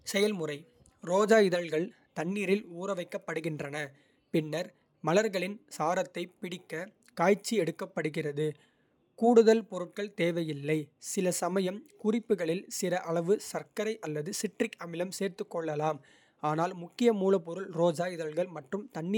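Nothing in the recording stood out as a technical fault on listening.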